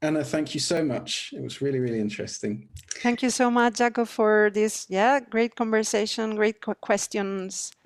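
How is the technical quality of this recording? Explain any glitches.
There's one glitch in the recording, a single tiny dropout. At 0.77 s, right after "thank you", a block of digital silence of about 2.7 ms cuts in. A short stretch of samples was zeroed, which fits a 128-sample buffer the program didn't fill in time. The signal drops to zero and back with no fade, so you hear a brief tick rather than a gap.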